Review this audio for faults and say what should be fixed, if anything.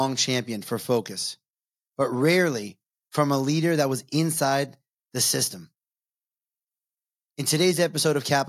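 Nothing needs fixing; no faults are audible here.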